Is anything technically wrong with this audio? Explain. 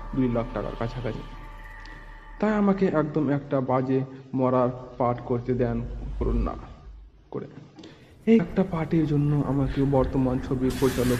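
Yes. At 1.14 s, 6.20 s and 8.38 s the sound briefly blurs and jumps forward, losing roughly 150 ms, 70 ms and 150 ms. These are compressed frames skipped: whole frames were never played, and the overlap between neighbouring frames smears each join into a short blip rather than a click.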